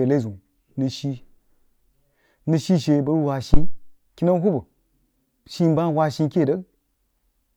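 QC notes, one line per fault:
3.54–3.83 s phantom power thump: a supply step on the live input passes through the coupling capacitors. The waveform shows one deep swing peaking at about -2 dBFS and decaying in 64 ms, and the spectrogram shows a low-frequency blob.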